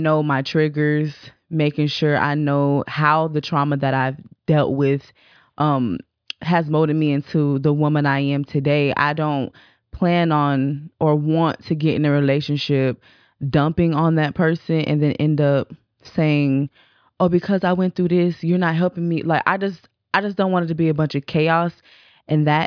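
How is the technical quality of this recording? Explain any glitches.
No audible glitches or faults.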